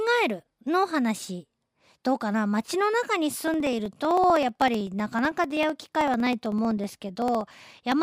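From about 3.48 s to 7.92 s the speech picks up periodic USB or driver dropouts: every 63.5 ms something stalls the bus or driver, and roughly half a millisecond of audio is skipped. The result is a steady ticking, about seventy ticks, riding on the speech.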